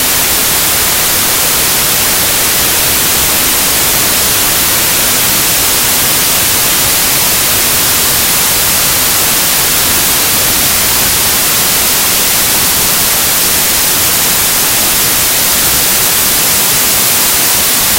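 From start to finish this has a wrong sample width problem, which fits packed 24-bit data being read as 16-bit. Many samples get stitched from mismatched bytes, so loud hiss swamps the buried original, which runs slow and low at about two-thirds speed.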